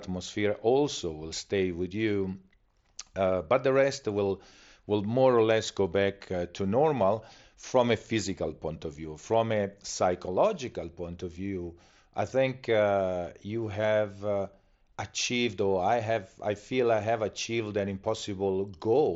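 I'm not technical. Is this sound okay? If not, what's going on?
Yes, nothing stood out as a problem when listening to this speech.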